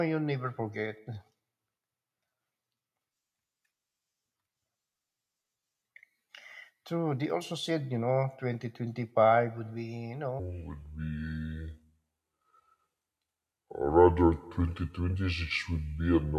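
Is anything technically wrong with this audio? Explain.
Yes. From 10.39 s to the end at 16.38 s, a wrong sample rate slows the speech to about two-thirds speed and drops pitch seven semitones. This fits 48 kHz audio played at 32 kHz. Voices sound low and sluggish.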